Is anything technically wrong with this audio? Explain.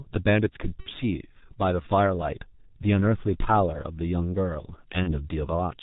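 Yes. Throughout, G.723.1 codec damage makes the speech muffled and hoarse with smeared consonants, consistent with a roughly 6 kbit/s stream. A spectrogram shows nothing above 4 kHz.

VoIP packet loss concealed by the speech codec occurs at 0.81–0.89 s and again at 5.04–5.29 s. Each time, the decoder repeats its last pitch and filter at falling gain, which fits about 60 ms and 30 ms of lost frames. The result is a fading buzzy tone or coloured noise that looks like flat, smeared energy on a spectrogram and a decaying envelope on the waveform.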